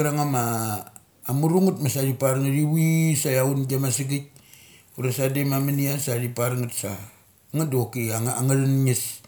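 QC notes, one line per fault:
No fault to log in these QC notes.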